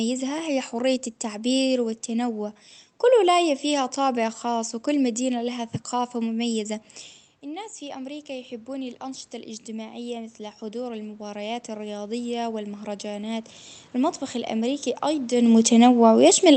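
Automatic gain rising runs from 5.45 s to 14.92 s, starting just after "طابع خاص وكل مدينة". The gain control judged the input too quiet and kept turning it up gradually, by about 12 dB in total. The speech and the room noise behind it swell together over roughly nine and a half seconds rather than jumping. This slow climb is separate from the talker's own movement around 7 s, which changes only the voice level.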